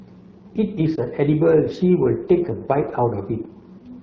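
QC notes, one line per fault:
throughout, AMR wideband (HD Voice) codec: The speech sounds rough and raspy, and the top band is airy hiss instead of detail. The coarse excitation behind this fits one of AMR-WB's lowest modes, around 8.85 kbit/s, where damage is plainly audible.
0.95 to 1.00 s, lost AMR speech frames: A brief dip or warble in the speech that recovers almost at once. The decoder filled the gap by repeating the previous pitch and vocal tract settings at lower gain, which fits a single lost 20 ms frame.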